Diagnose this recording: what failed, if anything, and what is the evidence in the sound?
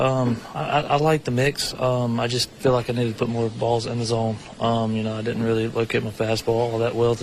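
The failure is at the network stage: an adaptive stream at a lower bitrate. From 3.28 to 5.28 s the treble abruptly thins and takes on a swirly, metallic coarseness, then snaps back with no gap either way. The sound points to the player switching from roughly 128 kbit/s MP3 to about 48 kbit/s when throughput fell. On a spectrogram those two seconds show a hard ceiling at 11.3 kHz with smeared, blocky high-frequency content, while the waveform stays continuous.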